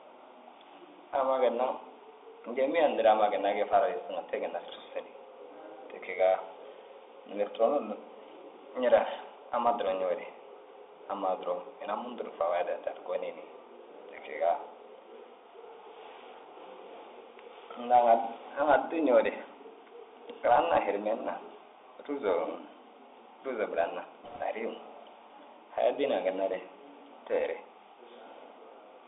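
The speech sounds boxed-in and narrow throughout: there is almost nothing below 300 Hz or above about 3.7 kHz, s sounds come out scratchy, louder bright passages distort, and a fine granular hiss sits beneath everything. This is the Bluetooth CVSD headset codec at work, which fits a 64 kbps link. CVSD sends a single up-or-down bit per sample and adapts its step size. When the signal moves faster than the step can follow, the result is that slope distortion and the constant grainy noise floor. From 24.24 to 24.41 s a brief rushing, crackly burst cuts across the speech, with no sharp loud clicks. These are bit errors on a Bluetooth voice link, at a rate of roughly one to two percent. Because every CVSD bit carries only a small step and a wrong step decays away, the flipped bits add a spray of noise rather than loud pops.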